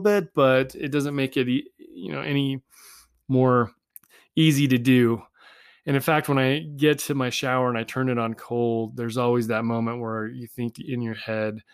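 No faults detected anywhere in the speech recording; nothing to flag.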